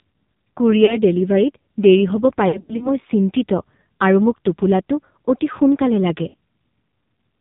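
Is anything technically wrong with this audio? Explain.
Yes. The whole clip of speech runs through an AMR narrowband mobile codec, and speech frames drop out at three points.

AMR narrowband mobile codec, throughout: the sound is sampled at 8 kHz and rebuilt from a vocal-tract model fed by a few pulses per subframe, so nothing above 4 kHz survives. At a low rate of about 5.9 kbps the damage is heavy. The voice comes out buzzy and synthetic, with a dull, boxy top end.

Lost AMR speech frames, at 0.86 to 0.98 s, 2.48 to 2.91 s after "দেৰি হ'ব" and before "মই চিন্তিত আৰু", and 6.28 to 6.34 s after "সোনকালে লাগে": corrupted frames made the decoder repeat its last good pitch and filter settings at falling gain. The single 20 ms loss is a brief warble. The middle event scatters 160 ms of losses across 320 ms, with runs up to 80 ms, giving smeared, fading stretches. The last event is a 60 ms drawn-out dip, and the voice is rough as it recovers.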